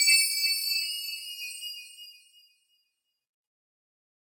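No audible technical faults.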